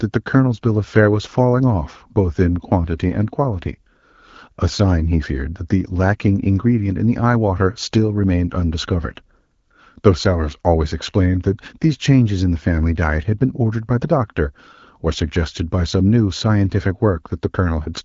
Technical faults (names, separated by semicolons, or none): none